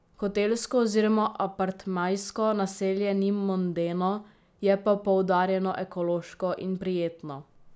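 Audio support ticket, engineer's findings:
Nothing wrong turned up on a listen to this speech clip, so there's no fault to log and no component to point at for this one.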